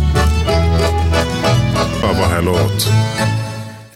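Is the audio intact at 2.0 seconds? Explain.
No. A CD skip occurs at 2.02 s. The laser lost its place on the disc's spiral track and landed on another turn. The player muted very briefly, for only a few milliseconds, and then resumed reading from the new position. You hear a small tick at the dropout. The sound then jumps abruptly, continuing from a different point in the material instead of following on smoothly.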